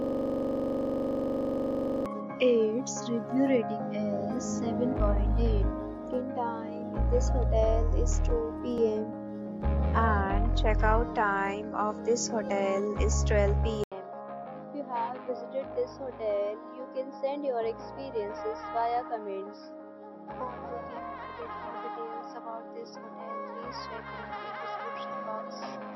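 From the first instant until 2.06 s, a system hang loop is already under way: one 42.67 ms slice of audio repeats 47 times, fitting a 2048-sample ring buffer replayed while the driver stalled. The short loop produces a steady buzz at about 23.4 Hz.

At 13.84 s an 80 ms silence breaks the audio, and from there to the end the input is likely switched to a poorer device. Nothing remains above 5.6 kHz, so the sound turns dull, drops roughly 10 dB in level, and carries a new, faint noise floor.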